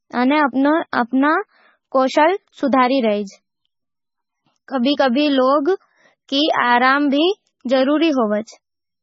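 All the way through, the speech sounds watery and swirly with nothing above 7.6 kHz, likely heavy MP3 compression at a very low bitrate, around 16 kbps.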